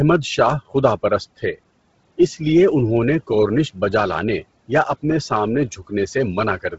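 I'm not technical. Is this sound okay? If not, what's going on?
No. Bluetooth LC3 compression, throughout: the speech sounds breathy and grainy, with no sound above 7.7 kHz, likely from heavy squeezing for a Bluetooth link.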